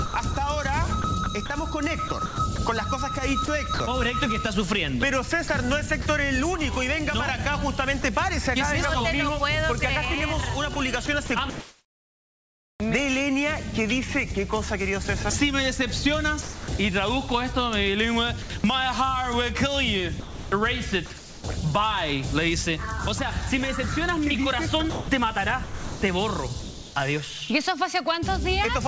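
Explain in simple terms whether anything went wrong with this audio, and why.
Sound chopped by the voice detector occurs at 0.06–3.8 s, 5.48–6.06 s, 10.74–12.8 s, 18.42–18.64 s, 20.2–21.44 s and 24.9–26.96 s. Quiet parts repeatedly flicker into a soft artificial hiss, likely because the sender's detector kept switching transmission off and on.

Sound dropped by the voice detector occurs at 8.02 s and 16.42–16.68 s. The sound briefly gives way to steady filler noise, then resumes. The sender's detector likely mistook those moments for background and stopped sending until it triggered again.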